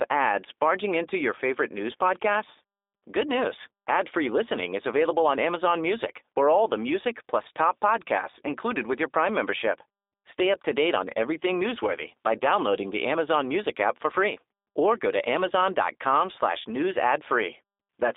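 From start to finish the speech sounds narrow and plainly processed, with a rough, synthetic edge and nothing above about 3.8 kHz. This is G.729 coding: a telephone band of roughly 300 Hz to 3.7 kHz, with speech rebuilt from a vocal tract filter, pitch predictor and sparse pulses, consistent with an 8 kbit/s G.729A stream.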